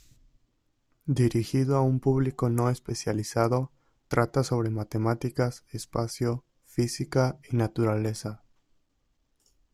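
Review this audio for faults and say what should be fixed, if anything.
Nothing to fix here, as I can't hear any technical fault anywhere in the recording.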